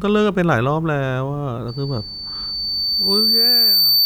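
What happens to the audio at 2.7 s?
At 2.7 s the speech is caught in a loudspeaker feedback squeal that starts at 1.68 s and runs to the end of the clip. The microphone is picking up the loudspeaker it feeds, and at 4.6 kHz the loop gain exceeds one, so that tone keeps reinforcing itself. At 2.7 s the tone is partway through a build-up of roughly two seconds, swelling into a squeal that ends up about 5 dB above the speech.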